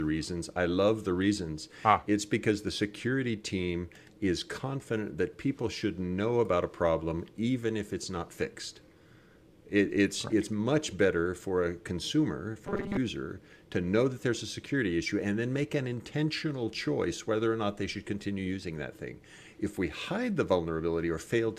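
From 12.67 to 12.98 s the sound turns hard and mechanical, a rigid metallic buzz fixed at 200 Hz that still tracks the rough shape of the audio. This is robotic sound from repeated short buffers. New audio was likely arriving too slowly, so playback kept looping the most recent slice, about 5 ms long to match the 200 Hz buzz, while the real material was skipped. Most of that stretch is made of these repeats.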